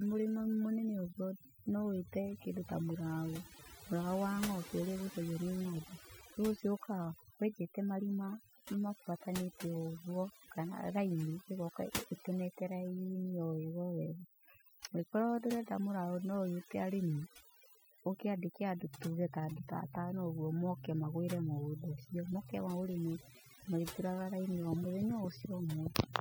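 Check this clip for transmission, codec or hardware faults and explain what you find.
One fault runs through the entire clip: overdone noise removal. The gaps between phrases fall to an unnatural near-silence dotted with twinkling specks. A noise reduction stage was pushed too hard. It cuts individual frequency bands deeply whenever their level sits close to its noise estimate, so the quieter detail of the speech is removed along with the background. Isolated bands that survive flicker on and off as those specks.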